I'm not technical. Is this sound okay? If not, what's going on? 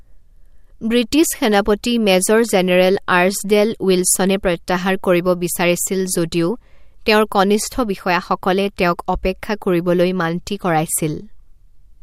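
Yes, nothing stood out as a problem when listening to this recording.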